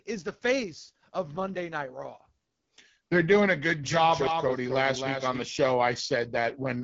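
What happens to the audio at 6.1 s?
Rough, raspy speech with a dull top end, audible at 6.1 s as throughout the clip. The cause is the AMR wideband (HD Voice) codec running at one of its lowest rates, which fits the 8.85 kbit/s mode. It models the voice as pulses driving a vocal tract filter up to 6.4 kHz and fills the band above that with shaped noise. With so few bits, the pulse coding turns coarse and grainy, and nothing reaches past about 7.5 kHz.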